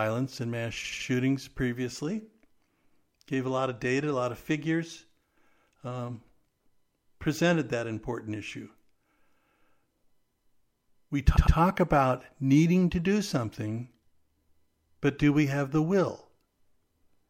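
Speech with two stutters from repeated frames. Right after "and mass", at 0.83 s, a block of about 78 ms plays three extra times through 1.06 s, adding roughly 235 ms. At 11.35 s, just before "about needing to do", a block of about 105 ms plays twice more until 11.56 s, adding about 209 ms. Each block fits a few compressed frames being written more than once.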